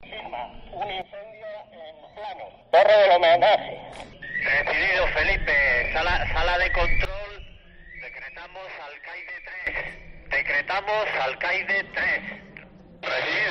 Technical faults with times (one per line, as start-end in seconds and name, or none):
1.02-2.73 sudden gain jump
7.05-9.67 sudden gain jump